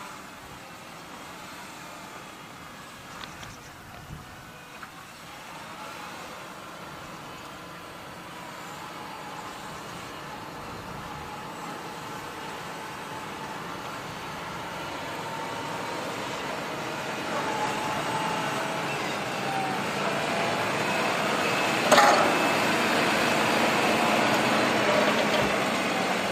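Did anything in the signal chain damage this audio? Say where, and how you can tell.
No, nothing in the signal chain has damaged this audio. No stage from capture to playback has left any audible trace.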